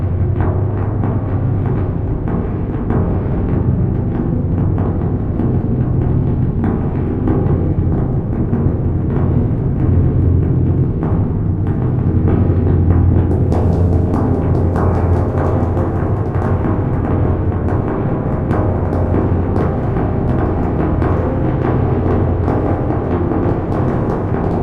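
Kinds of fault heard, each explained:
No technical faults are audible anywhere in this everyday-sound recording.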